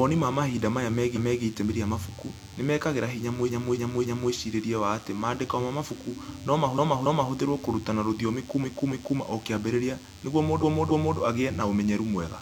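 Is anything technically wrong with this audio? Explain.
Yes. A DECT cordless phone buzz runs through the whole speech clip, sitting about 25 dB below the signal. A nearby DECT handset or base transmits a burst every 10 ms, and something in the audio chain rectifies that radio energy. The result is a thin, steady 100 Hz buzz carrying a dense stack of harmonics, which makes it sound edgy rather than like a smooth hum. It stays constant under the speech and in the pauses.

Repeated frames occur five times. In each case a block of about 279 ms, which fits six compressed frames, is played again. At 1.12 to 1.40 s, just after "ma mahinda maya" and before "itemi rĩa mabuku nĩ", it plays once more. At 3.44 to 4.28 s it plays three extra times. At 6.74 to 7.29 s it plays twice more. At 8.60 to 9.15 s, between "kũrutana rũthiomi" and "o kĩambĩrĩria nĩguo", it plays twice more. At 10.59 to 11.15 s, following "o kĩambĩrĩria nĩguo", it plays twice more. 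Each time the decoder received the same frames again, so the speech stutters. Together the repeats make the clip about 2.8 s longer.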